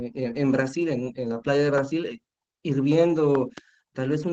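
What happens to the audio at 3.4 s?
A loud pop lands at this point: two sharp clicks between 3.35 and 3.60 s, standing roughly 10 dB above the surrounding signal while the speech continues underneath. The likely cause is a sudden voltage step or pulse, from a plug, a switch or static, shaped by the following circuitry. On a waveform they show as two tall, narrow spikes rising well clear of the speech envelope. On a spectrogram they appear as two thin vertical stripes spanning the whole band.

Across the same moment, and throughout the clip, Opus voice compression is plainly audible. The speech sounds muffled and slightly hoarse and robotic, which fits the SILK linear-prediction coder working at around 12 kbps. At that rate the excitation is coded coarsely and the audio is limited to a wideband range. On a spectrogram, energy stops sharply at 8 kHz with nothing above it. The harmonics look smeared and blotchy, which is consistent with processing in 20 ms frames.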